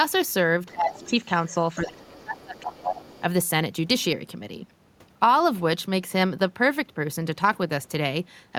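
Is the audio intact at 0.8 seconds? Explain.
No. From 0.73 to 1.18 s the speech drops by up to about 15 dB, likely speech suppressed in double talk, where an echo canceller turned down both the talker and the loudspeaker echo. The waveform envelope shrinks.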